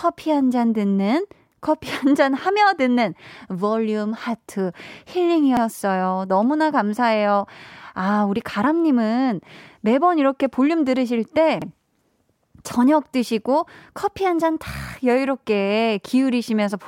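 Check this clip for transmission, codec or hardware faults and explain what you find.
Overlapping chunks at 5.57 to 5.62 s and 11.62 to 11.67 s: the speech was handled in 6.0 s chunks, each starting before the previous ended, so about 48 ms replays at both joins, heard as a brief stutter-click at regular spacing.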